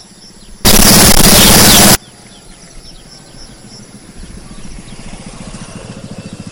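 From 0.65 to 1.95 s the sound turns into very loud, harsh distortion, and the quiet bits blast out as hard as everything else. That's most likely a signed and unsigned mix-up on the 8-bit samples: with the top bit flipped, every zero crossing leaps across the full range.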